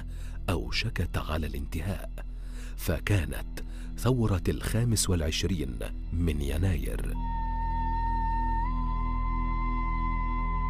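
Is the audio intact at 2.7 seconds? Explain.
Yes, at 2.7 seconds the audio is intact, with no dropout, glitch or other fault to be heard there.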